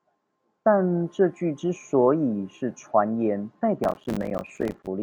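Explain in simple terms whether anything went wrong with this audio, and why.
From 3.84 to 4.87 s, the speech breaks into a gritty crackle. This is processor overload crackle. The computer fell behind and missed around fifty tiny chunks of audio, each roughly 5 ms long. Every miss left a brief hole of silence, and together they crackle.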